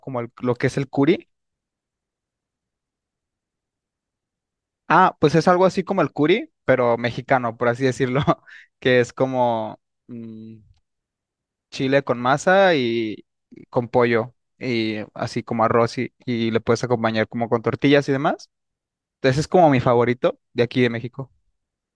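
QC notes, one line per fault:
Nothing to log for this speech clip. A full listen turns up no faults.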